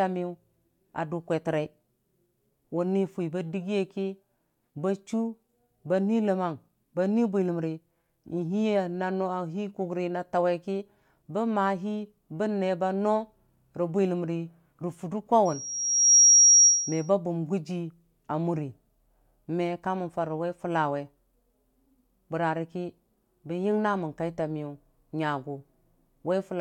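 From 15.45 to 17.10 s a piercing 5.7 kHz tone swells over well under a second until it sits about 10 dB above the speech. This is loudspeaker feedback squeal: the microphone picked up its own loudspeaker, and at that frequency the loop gain exceeded one, so the tone kept growing.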